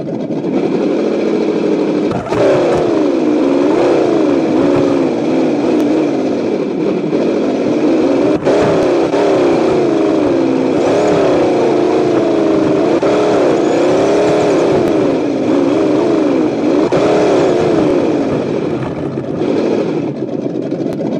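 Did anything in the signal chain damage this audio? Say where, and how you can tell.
Yes, overlapping chunks at the buffer or chunked-processing stage: every 3.0 s, at 2.78, 5.80, 8.83, 11.86, 14.88, 17.91 and 20.93 s, about 25 ms of audio replays as each chunk starts early. It is heard as a regular click or stutter. A waveform shows a repeated 25 ms segment with a discontinuity at each join, and a spectrogram shows evenly spaced thin vertical lines.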